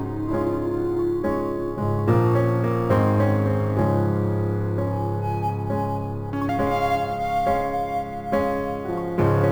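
Music throughout carries imaging from sample-and-hold upsampling: each sample was simply repeated, leaving mirrored images from 11.03 to 22.05 kHz, about 29 dB down, whose fizz tracks the music and moves against its pitch, unlike steady hiss.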